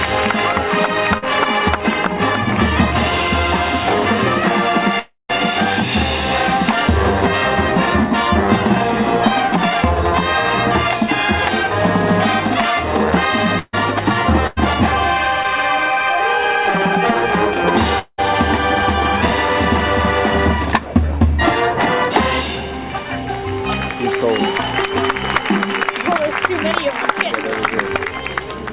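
At 1.18 to 1.24 s, short concealed packet loss: 40 ms never arrived and was patched by extending the previous sound, heard as a brief smear, with smoothed, repeated-looking harmonics on a spectrogram.

From 4.99 to 5.31 s the audio drops out for about 300 ms, likely a long network dropout. A buzzy continuation fades, then 160 ms of near-silence follows, a flat trough in the waveform before the audio resumes further on.

Between 13.59 and 18.22 s, repeated packet loss gives a choppy, robotic quality. Five gaps, the longest 190 ms, are filled with extended sound, visible as recurring striped, over-regular patches across the spectrogram.

At 28.05 to 28.10 s, another short concealed packet loss, a 20 ms hole, stretches the sound by about 10 ms. Across the whole clip nothing appears above 4 kHz, consistent with a narrowband call codec.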